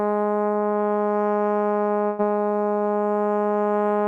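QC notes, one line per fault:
2.07–2.21 s, burst of packet loss: about 110 ms of the last music is stretched and faded with no silence, unlike a plain dropout, then resumes about 120 ms further on.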